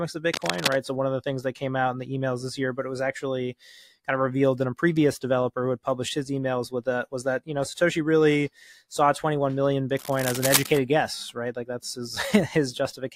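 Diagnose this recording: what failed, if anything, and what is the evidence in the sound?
The analogue wiring stage failed. Cable scratch noise appears from 0.32 to 0.76 s and again from 9.96 to 10.77 s. Dense, ragged bursts of rustling sit only a few decibels below the sound. A loose or worn connector being moved is the likely cause.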